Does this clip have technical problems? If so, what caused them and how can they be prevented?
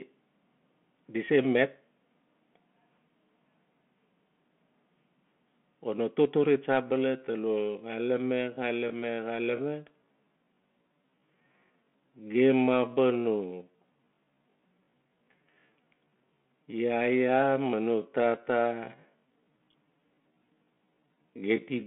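Yes. A Bluetooth CVSD headset codec runs throughout: the speech is narrowband, roughly 200 Hz to 3.4 kHz with nothing above 4 kHz, which fits CVSD's one-bit-per-sample coding at 64 kbps. Its adapting step size lags loud high sounds, giving plainly audible distortion, scratchy s sounds and granular hiss. Using a wideband headset profile or a wired microphone prevents this.

A time-stretched section runs from 6.8 s to the end. The pace abruptly slows to about 0.65 times normal speed while pitch holds steady, so the speech drags. This is likely from software repeating short pieces to lengthen the audio. Avoiding length-fitting stretches, or applying them uniformly and lightly, prevents it.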